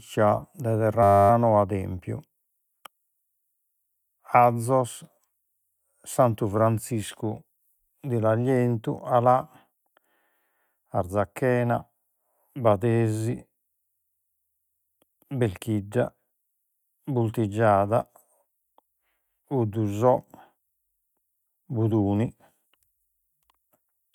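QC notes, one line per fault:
1.03 to 1.3 s, system hang loop: a 10 ms slice of the speech repeats 27 times as the audio hardware keeps cycling one short ring buffer while the system is stalled. A loop that short turns into a steady 100 Hz buzz, with basically nothing of the audio lost.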